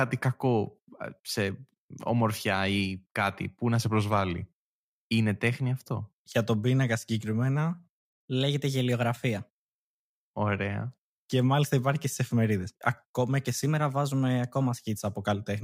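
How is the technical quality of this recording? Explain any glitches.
The recording has three audible pitch-and-speed glitches, each likely a drift correction step. Clock-matching software abruptly changed the playback rate to rebalance its buffer. Just after "κάτι που να", from 3.82 to 4.58 s, the speech slows about 6% and drops roughly 110 cents. It then runs about 6% fast and 103 cents sharp from 7.71 to 9.95 s and from 13.65 to 14.78 s, before returning to normal speed.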